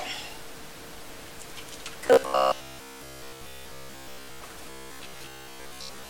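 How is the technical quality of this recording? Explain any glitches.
The recording has clear glitches from about 2 s onward. Robotic sound from repeated short buffers, 2.07–4.43 s and 4.70–6.09 s: late audio is likely padded by looping 15 ms chunks, skipping most material and imposing a rigid 66.8 Hz metallic buzz.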